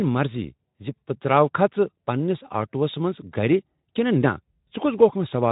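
Nothing in this speech clip stood out as a fault on listening.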